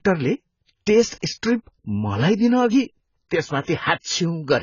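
Throughout the speech, nothing sounds above 7 kHz, and the smeared, watery texture of a very low-bitrate encode persists. The likely cause is low-bitrate audio saved at a high bitrate: a heavily compressed source re-encoded as high-bitrate MP3. Unlike a plain low-pass filter, this also carries the coding damage.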